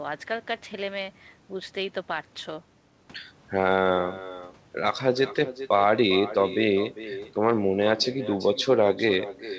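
From start to finish, every phrase of the speech is trailed around four-tenths of a second later by a thinner copy about 14 dB quieter. This is echo with no canceller: the far end's loudspeaker feeds its microphone, and that pickup returns uncancelled over a call path whose G.722 coding stops at 8 kHz.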